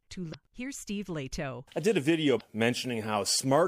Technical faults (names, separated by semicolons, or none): damaged data in a compressed stream